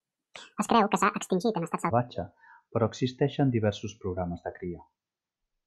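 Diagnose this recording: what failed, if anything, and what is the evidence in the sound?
The opening section of the speech, from 0.00 to 1.90 s, plays at the wrong speed: it runs 1.73 times too fast, so the voice is hurried and raised by roughly ten semitones, then drops to normal pitch and pace at 1.90 s. Because speed and pitch shift together, this is a rate mismatch rather than pitch processing, likely a playback or editing stage reading that stretch against the wrong clock or sample rate.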